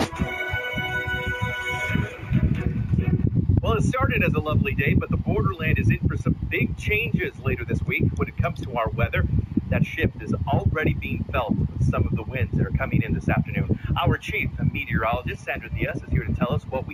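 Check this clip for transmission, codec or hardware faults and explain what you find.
One fault runs through the whole clip: imaging from linear upsampling. The rate was raised by straight-line interpolation, which fits a 16 kHz source raised to 48 kHz. That weak filter dulls the top of the band and leaves a faint mirrored copy between 8 and 16 kHz, roughly 35 dB down, heard as a light metallic shimmer on bright, sibilant sounds.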